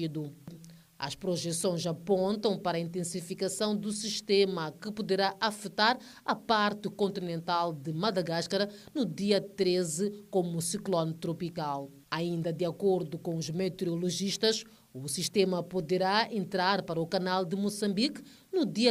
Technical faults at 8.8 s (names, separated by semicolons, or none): none